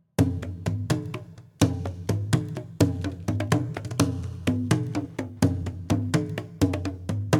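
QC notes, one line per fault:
4.56–7.40 s, Wi-Fi interference: a faint, steady ticking about ten times a second sits far below the music until the end. A nearby Wi-Fi radio's beacon, repeating every 102.4 ms, is rectified by the audio circuit and heard as clicks.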